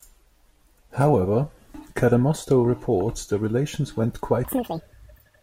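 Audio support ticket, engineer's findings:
Section at the wrong speed, 4.45 s to end: speech plays at double speed, pitch around 10 semitones up, likely from a clock mismatch. Spectrogram shows harmonics jumping upward, waveform visibly compressed.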